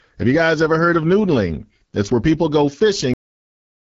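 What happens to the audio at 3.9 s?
By 3.9 s the audio is already silent. The speech stopped abruptly at 3.14 s, partway through a sound, with no decay, and digital silence runs to the end. This is a cut-off end: the final buffers were never written or played back.

Up to that cut, the speech sounds rough and raspy, with nothing above about 7.5 kHz. That points to the AMR wideband (HD Voice) codec running at one of its lowest rates, roughly 8.85 kbit/s, where its pulse-driven vocal tract model cannot code the voice cleanly.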